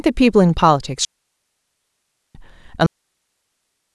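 At 1.05 s the speech drops into a clean hole of near silence that lasts 1.3 s, ending at 2.35 s. This is a digital wireless dropout. The link lost too much data, so the receiver muted quickly instead of passing corrupted audio. No noise burst marks either edge. A second dropout starts at 2.86 s and mutes about 1.14 s, running to the end of the clip.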